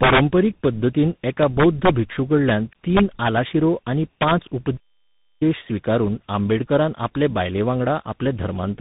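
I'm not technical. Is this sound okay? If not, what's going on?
No. Two things are wrong with it.

The first is tandem speech coding, and it runs through the whole clip. The speech was squeezed by one phone-network coder, unpacked, then squeezed again by another before it reached you, and the damage from each step piles up. That's why it sounds muffled and rough and warbly, with all the crisp top end gone above about 3.8 kHz.

The second is integer overflow, which causes harsh, violent cracks at about 0.03 to 0.2 s, 1.42 to 1.89 s, 2.97 to 3.37 s and 4.22 to 4.31 s. When the speech gets loud, the number storing the sound runs past its limit and flips to the opposite extreme instead of just topping out. That produces these sharp snaps, much nastier than ordinary distortion, with the worst one right at the start.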